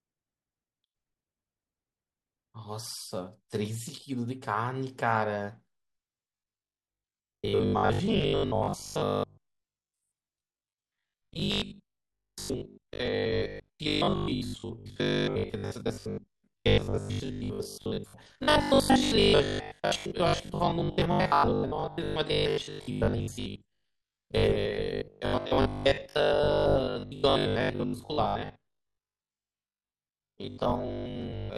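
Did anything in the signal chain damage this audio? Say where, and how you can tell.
Yes. From 6.32 s onward, there is robotic sound from repeated short buffers: a rigid 50 Hz buzz. Likely a driver buffer underrun, looping 20 ms chunks.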